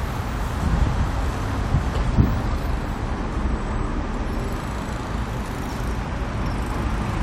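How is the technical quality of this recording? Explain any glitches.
No technical glitches can be heard anywhere in the recording. The sound runs steadily without any break or disturbance to explain.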